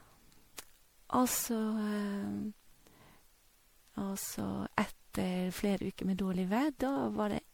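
Speech with generation loss throughout. It sounds swirly, smeared and hollow, with blurred attacks. That is likely from about seven rounds of MP3 re-encoding at around 96 kbit/s.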